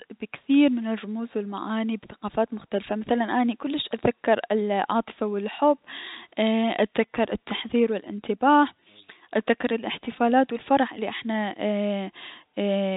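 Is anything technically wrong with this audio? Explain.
No, nothing is technically wrong with this audio.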